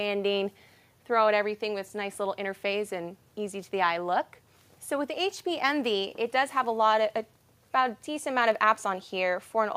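Nothing in the audio stood out as a technical problem on listening.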